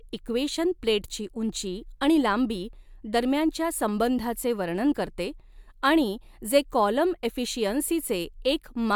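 No dropouts, clipping, glitches or other transport or device faults are audible anywhere in this speech recording.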